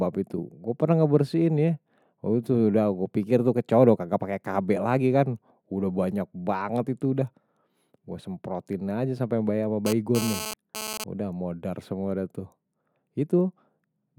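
From 9.86 to 11.04 s a GSM phone buzz, a hard, raspy 217 Hz tone about 8 dB below the speech, breaks in. A nearby 2G handset's radio bursts are rectified by the audio circuit. Its rasp and pitch set it apart from smoother 50 or 60 Hz mains hum.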